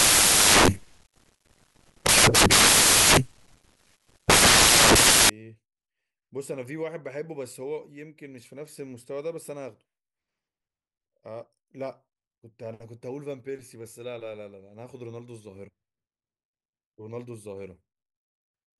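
Right from the start, 0 to 5.3 s, the speech is buried under loud, harsh broadband noise: samples built from the wrong bytes. The reader misassembles each sample, so the jittery low-order bits land in the high-order position.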